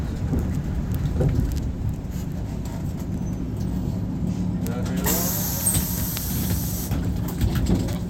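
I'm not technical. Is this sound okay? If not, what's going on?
Yes, it sounds fine; nothing stood out as wrong when listening to it.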